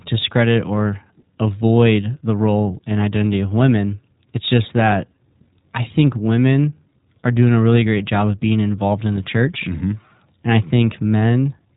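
iLBC codec damage runs through the whole speech clip. The narrowband coder removes everything above about 3.8 kHz, so sibilants and breath lose their top and the sound is boxed in. Each short block of excitation is coded without reference to the one before, and the texture points to 20 ms frames at the 15.2 kbps mode. The independently built blocks leave a plainly audible rough, slightly synthetic grain on voiced sounds, sitting steadily on every phrase.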